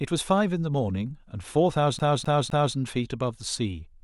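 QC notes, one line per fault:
1.99–2.76 s, CD stuck on one turn: a 256 ms slice of the speech plays three times in a row with a brief mute at each jump, giving a fast, even stutter. On the waveform the same block repeats identically; the spectrogram shows copied patterns split by thin gaps.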